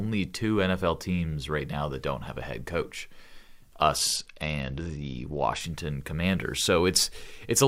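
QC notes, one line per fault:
3.97–5.62 s, Bluetooth SBC bit pool drop: the speech suddenly loses its brightness and a gritty, granular noise rides along with it. The link appears to have been congested, so the encoder cut its bit budget sharply. The depth of the dulling fits a bit pool falling from around 28 to around 10, near 84 kbps. The top sub-bands get almost no bits and the rest are coarsely quantised. Clarity returns at 5.62 s as the rate recovers.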